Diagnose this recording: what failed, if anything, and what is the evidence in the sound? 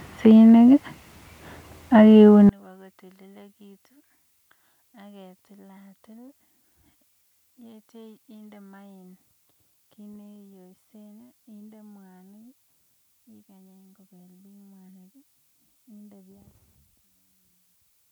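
From 2.49 s to the end, the speech falls about 34 dB when summed to mono: one channel inverted, likely from reversed polarity in the analogue wiring.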